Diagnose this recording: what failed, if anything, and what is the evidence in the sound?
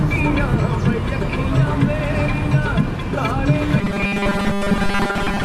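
Starved driver buffers likely looped 5 ms chunks from 3.81 to 5.45 s, causing robotic sound from repeated short buffers: a rigid 200 Hz buzz.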